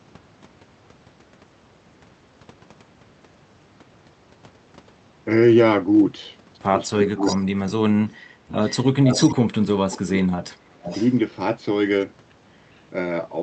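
From 7.02 to 8.33 s the speech is suppressed in double talk: it dips and breaks up by up to about 35 dB, likely because the echo canceller turned down the near talker along with the far end. On the waveform the envelope collapses into gaps, and the spectrogram shows blank vertical stripes. Shorter dropouts recur at 9.28–9.64 s and 10.04–10.37 s.

Echo leak, likely from a loudspeaker echo canceller that removed only part of the echo, returns a delayed copy of the voice about 0.38–0.40 s later. This happens at 7.08–7.37 s (about 10 dB down), 8.66–9.35 s (about 5 dB down), 9.91 s (about 20 dB down), 10.84–11.12 s (about 15 dB down) and 12.75 s (about 40 dB down). On the spectrogram the harmonic patterns reappear after a fixed lag, and all content stays below the 8 kHz band edge of the call codec.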